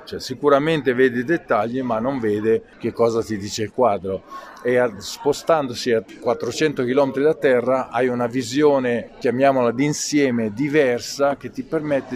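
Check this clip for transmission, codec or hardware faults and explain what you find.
Nothing wrong can be heard anywhere in the clip.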